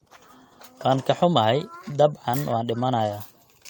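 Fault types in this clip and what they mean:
Nothing to list here; there's no technical fault to be heard anywhere in this bit of speech.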